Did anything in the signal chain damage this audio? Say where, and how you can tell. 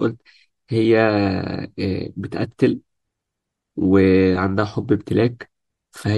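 Yes, at the codec stage, and it runs through the whole speech clip. There's plainly audible MP3 compression damage, likely from a lossy encode at a bitrate near 64 kbps. At that rate the encoder drops weak frequency content and trims the top end to save bits.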